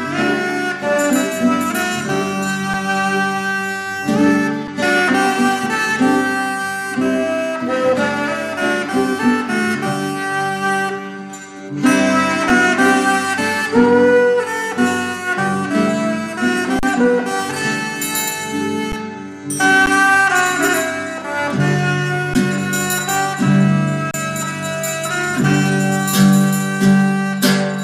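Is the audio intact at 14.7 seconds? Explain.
Yes, at 14.7 seconds the audio plays through cleanly with no dropout, click, distortion or other fault.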